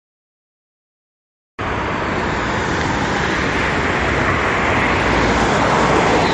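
For the first 1.59 s there is nothing but digital silence, and then the sound arrives at full level at 1.59 s with no attack or fade-in. This is a cut-off start. Capture began while the sound was already underway, so its onset is missing. On a waveform it looks like a flat line that jumps straight to full amplitude. A spectrogram shows a blank region ending at a hard vertical edge.

From that point on the audio has a watery, swirling texture, and transients sound smeared rather than crisp. These are the marks of heavy MP3 compression, likely from a low bitrate around 48 kbps. With so few bits, the encoder removes the top of the spectrum and drops quieter frequency components, which then flicker in and out between frames. A spectrogram shows a flat ceiling at about 11.1 kHz with nothing above it, and patchy, blocky gaps below.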